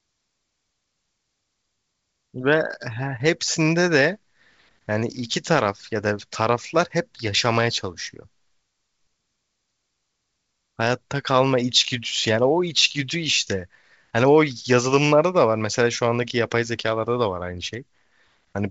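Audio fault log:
Nothing to log here: the speech comes over G.722 wideband telephone coding at what sounds like the full 64 kbit/s, topping out around 7.8 kHz with at most a faint trace of coding hiss.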